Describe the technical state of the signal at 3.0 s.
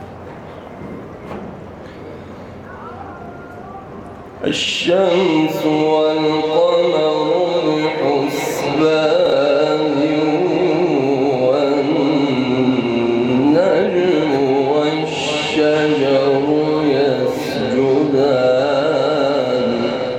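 At 3.0 s the signal is intact, with no dropout, distortion, glitch or other fault audible at that moment.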